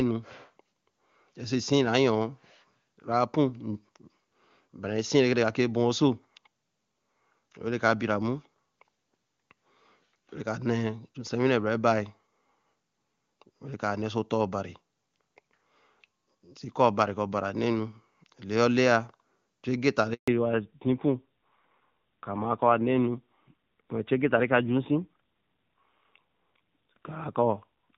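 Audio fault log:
20.14–20.28 s, handover gap: The sound fades out within a few tens of milliseconds and stays silent for about 140 ms. This fits a network handover during which no speech frames reached the receiver, so the audio in that interval is lost rather than concealed.
20.28 s to end, fallback to narrowband: From the moment the sound resumes, nothing above 4 kHz remains, and the sound turns duller and rougher than the clean HD Voice before the gap. This points to the call dropping from AMR-WB at around 23.85 kbit/s to AMR-NB at around 7.4 kbit/s.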